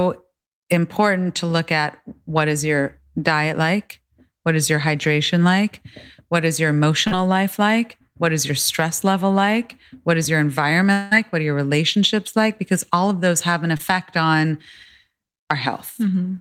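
Short concealed packet loss at 7.07 to 7.13 s: about 40 ms of audio arrived too late, and the receiver extended the preceding sound across the gap, leaving a brief smear. Long network dropout at 10.93 to 11.13 s: roughly 180 ms went missing, likely from a network interruption, and the concealment carried the last sound through as a fading buzz with no silence before the audio resumed. Short concealed packet loss again at 13.77 to 13.81 s: a 20 ms hole was patched by continuing the prior sound, heard as a quick wobble.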